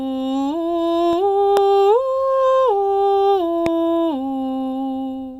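At 1.57 s there's a loud pop, a sharp click standing well above the music, and a second, softer one at 3.66 s. Each is a single brief spike riding over the music, likely a voltage transient from a plug, switch or static.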